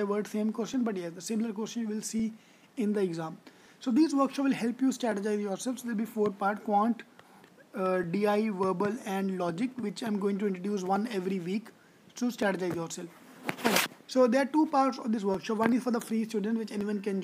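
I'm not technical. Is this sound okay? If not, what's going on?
No. There are clock drift buffer slips from about 0.74 s to 16.81 s: a click or pop roughly every 1.46 seconds, about ten in all. The likely cause is two pieces of equipment each keeping their own time, with one running slightly fast. The gap between them slowly builds up or runs short until a tiny sliver of audio, a few dozen samples, gets skipped or doubled, and each jump is heard as a click.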